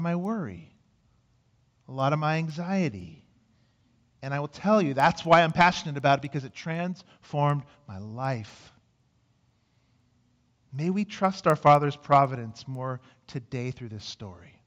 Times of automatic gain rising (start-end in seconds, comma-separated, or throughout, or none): none